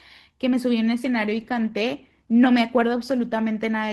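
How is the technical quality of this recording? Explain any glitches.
The quality drops partway through. From 0.85 s to the end, an adaptive stream at a lower bitrate takes over without a gap. Codec artefacts suddenly rise, a change that fits a step down to roughly 16 kbit/s.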